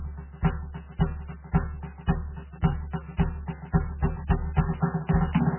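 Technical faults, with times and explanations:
Throughout, MP3 compression: the music sounds watery and swirly, with smeared attacks and nothing above 3 kHz. This is likely a very low-bitrate MP3, around 8 kbps, where the encoder runs so short of bits that it drops weaker frequency lines frame by frame, so they flicker in and out, and it cuts the treble entirely. Unlike a plain low-pass filter, the damage moves and warbles from moment to moment rather than simply dulling the sound.
3.99 to 5.58 s, doubled audio track: a second full-band copy of the music enters abruptly and runs to the end, trailing the original by about a second at roughly the same level. It carries no decay or room colour, so it is not reverb or an echo off a surface. The likely cause is the same audio arriving again by a slower path, or two out-of-step copies held together in an edit.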